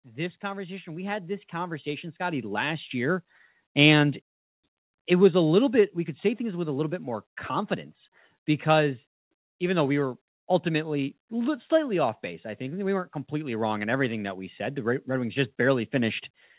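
From 0.05 s to 2.99 s the speech has automatic gain rising. The gain control judged the input too quiet and raised its gain by about 14 dB over roughly three seconds, so voice and background noise swell together. On a waveform the envelope widens steadily across that span, noise floor included. A spectrogram shows every band brightening in step, all beneath the 4 kHz ceiling of the narrowband telephone codec on the call path.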